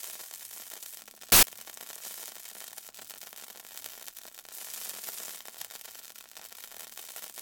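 At 1.32 s a burst of loud, harsh noise erupts and lasts until 1.43 s. These are samples built from the wrong bytes: each value was assembled with its bytes misaligned or swapped, so the rapidly changing low bits became the dominant part.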